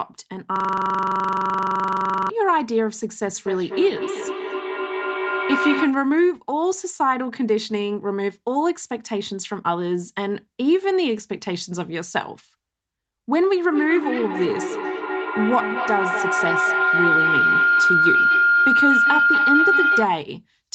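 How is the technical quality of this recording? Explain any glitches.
The recording has three faults, heard over a call path whose sound stops at 8 kHz, consistent with a call codec running at about 32 kbps.

System hang loop, 0.56 to 2.30 s: the computer or driver stalled while the audio hardware kept replaying its ring buffer. A 42.67 ms slice, consistent with a 2048-sample buffer, repeats 41 times, producing a rough buzz at 23.4 Hz.

Feedback echo between two devices, 3.35 to 6.03 s: a second device in the room replayed this microphone's signal, which was picked up again, beyond either echo canceller's reach. The speech returns about a fifth of a second later, peaking about 4 dB below the speech, thinner and ringing.

Feedback howl, 13.72 to 20.19 s: the same loop gained level on each trip, so the repeats grew instead of fading and narrowed to the frequencies the loop favours. A tone around 1.5 kHz swells to about 2 dB above the speech, with the loop coming round about every fifth of a second.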